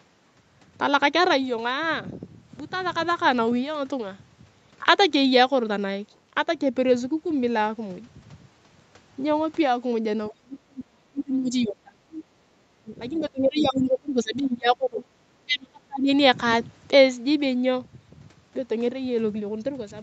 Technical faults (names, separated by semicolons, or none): other side's voice leaking through; speech suppressed in double talk